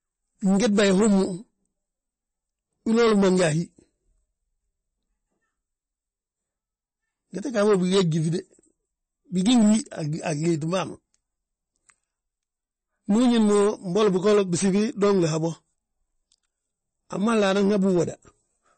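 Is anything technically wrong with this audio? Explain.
Yes. Throughout the speech there is audible damage consistent with MP3 compression, likely at a low bitrate around 32 kbps. Starved of bits, the encoder drops all content above 8.3 kHz and lets weak frequency lines flicker between frames, so the sound turns watery and swirly, with chirpy sibilants. A spectrogram shows a flat ceiling at 8.3 kHz and speckled, patchy gaps below it.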